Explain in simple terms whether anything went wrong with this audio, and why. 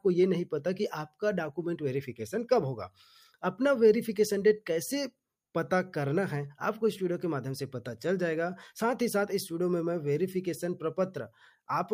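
The noise suppressor made a mistake near the end, between 11.29 and 11.69 seconds. This is a case of sound cut by the noise suppressor: the part of the system meant to remove background hiss mistook real sound for noise and turned it down. For a brief moment in that stretch, adding up to well under half of it, the sound dips noticeably quieter than what surrounds it.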